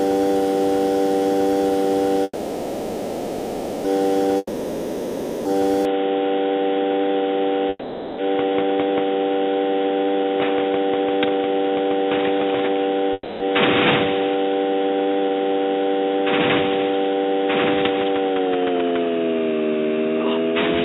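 At 2.23 s a call audio freeze begins and lasts until 3.87 s. The last sound is stretched into a buzzy, fading tail. A brief silence of about 30 ms follows. The stall is likely caused by delayed packets draining the jitter buffer. When audio resumes, it picks up exactly where it stopped. About 1.6 s of gap has been inserted, and nothing is lost.

From 4.37 s to 5.61 s comes a long network dropout. It opens the same way, with a decaying fill and a short silence. This time the sound returns further along. Roughly 1.08 s of audio never plays. Packets that likely never arrived leave a real hole, not just a pause.

At 5.85 s the input switched to a poorer device, and it stays that way to the end. The change is sudden, with no silence at the switch and no jump in loudness. Above 3.8 kHz nothing remains, so the sound turns dull and boxy. A new background noise sits roughly 45 dB below the signal. 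A likely swap to a narrower microphone or headset profile explains this.

Two more call audio freezes follow. One runs from 7.69 s to 8.21 s and adds about 0.49 s. The other runs from 13.13 s to 13.43 s and adds about 0.27 s. Each has the same fading fill and a short silence.

From 9.90 s to 13.10 s a jitter buffer speed-up runs at 114 percent. Pitch holds, but the sound feels hurried. Short pitch-period slices are cut repeatedly, about half a second in total, to shrink the buffered delay. A second speed-up from 17.82 s to 19.53 s runs at 117 percent and trims roughly 0.3 s.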